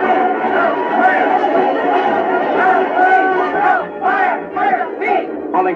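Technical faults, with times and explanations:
No technical faults are present in the signal at any point.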